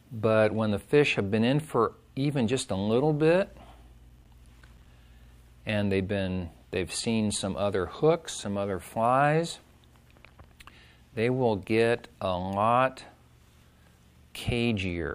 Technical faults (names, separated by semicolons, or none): processor overload crackle